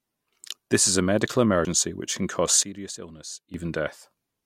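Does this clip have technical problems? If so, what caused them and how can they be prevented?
Yes. At 1.65 s, between "is a medical" and "which can cause", the speech jumps forward, and roughly a tenth of a second of audio is gone. This is compressed frames skipped: one whole frame, about 93 ms long, never reached the output because it was missing or rejected as damaged by the decoder. Reliable transport with error checking, or decoder-side concealment, would prevent it.

From 2.63 s, just after "which can cause", the level abruptly drops by about 12 dB. The speech and the background noise fall together, and the level snaps back at 3.54 s. The likely cause is a sudden gain jump, where a digital gain setting or bit shift was applied instantly from one sample to the next, with no ramp. Smoothing every gain change over a few milliseconds would prevent it.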